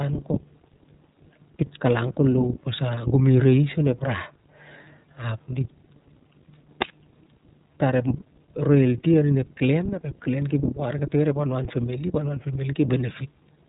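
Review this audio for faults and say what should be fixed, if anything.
The whole clip carries iLBC codec damage. Nothing above 4 kHz survives, so the speech sounds muffled and narrowband. Each 30 ms frame is coded independently, leaving a plainly audible rough, synthetic texture. This fits the 13.33 kbps mode. To prevent it, use a wideband codec for this path.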